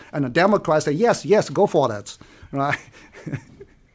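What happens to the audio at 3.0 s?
At 3.0 s the resampler restarts on every block, a fault running from 0.48 s to 3.94 s. The 44.1 kHz to 16 kHz conversion handles each 40 ms block alone, so every block edge gets a small error. This produces a 25 Hz ticking buzz under the speech.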